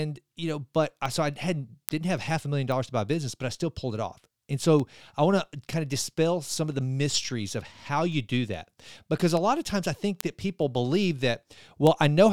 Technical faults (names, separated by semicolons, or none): word clock ticks